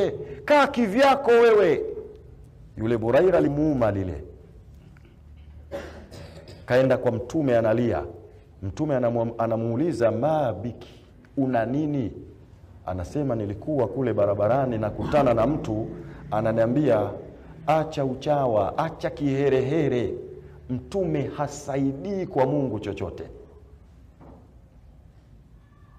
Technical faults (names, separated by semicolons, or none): compressed frames skipped